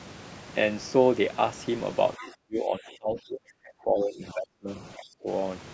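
From 2.17 to 4.68 s the talker's level sinks hard, by roughly 30 dB at the deepest point. It happens again, a bit shallower, from 4.96 to 5.28 s. That's most likely speech suppressed in double talk: the far end was talking too, the echo canceller couldn't tell this talker from its own loudspeaker echo, and it turned both down.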